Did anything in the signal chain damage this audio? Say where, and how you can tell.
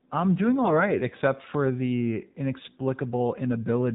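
Yes. At the codec stage, AMR narrowband mobile coding runs through the whole clip: nothing passes above 4 kHz, and the speech is buzzy and synthetic, consistent with a low mode near 7.4 kbps. A spectrogram shows a hard ceiling at 4 kHz with smeared, pulse-driven harmonics.

On the network, AMR bit errors hit from 0.64 to 0.91 s, between "I'm doing" and "except for the". Flipped low-priority bits scatter the excitation pulses, so pitch and level hold while the sound turns hoarse and gargly. This span sounds like a handful of 20 ms frames, and a spectrogram shows noisy, broken harmonics there.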